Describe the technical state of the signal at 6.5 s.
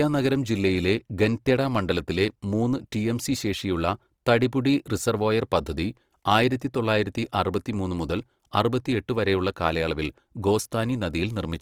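Opus compression is present at 6.5 s, as it is across the whole clip, likely from the music (CELT) mode. With too few bits, bands are filled by folding lower ones or with noise, leaving the speech grainy and rough up to about 20.4 kHz, which fits roughly 24 kbps.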